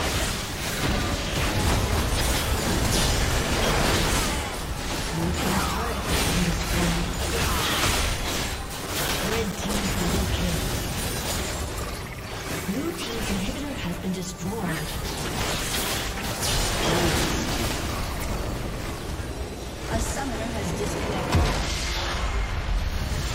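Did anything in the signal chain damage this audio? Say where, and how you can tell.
Yes, at the storage and playback stage: CD scratch ticks. Between 8.43 and 10.60 s there are 11 short ticks, the longest only a few milliseconds, about five a second. A blemish defeats error correction on each disc revolution. That steady rotation-locked rhythm separates them from random buffer-underrun clicks.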